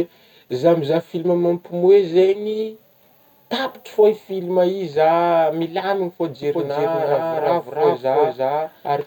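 From 6.43 s to the end, a doubled audio track appears: a full-level copy trails the speech by roughly 400 ms, starting abruptly, likely from a second, slower capture path.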